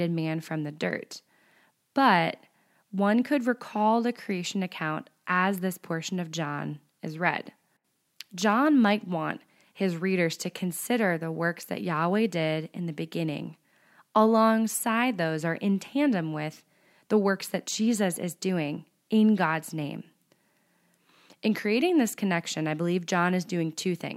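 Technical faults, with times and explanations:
No technical faults are audible in the speech.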